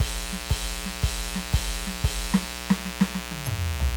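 A music recording with two faults. A mains buzz runs through the whole clip. It is a steady, raspy buzz built on 60 Hz harmonics that reach into the kHz range. Its spiky character points to a dimmer, rectifier or unshielded cable. It sits roughly 10 dB below the music. There is also a corrupt frame decoded from 3.44 to 3.47 s. It is a brief glitch lasting about 30 ms, peaking at around -25 dBFS. Damaged bits in what sounds like a single compressed frame were decoded anyway. That put energy at the wrong frequencies.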